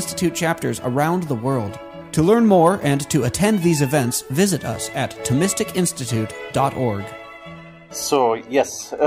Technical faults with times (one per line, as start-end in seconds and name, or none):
2.52-2.68 hard clipping
8.13-8.18 hard clipping